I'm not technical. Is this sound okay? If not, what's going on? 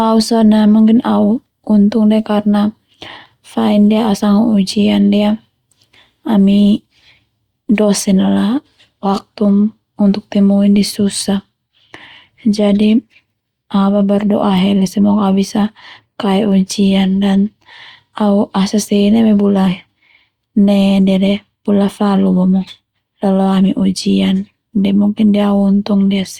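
Yes, this one's fine: I didn't hear any dropouts, clicks, distortion or other glitches anywhere in the recording.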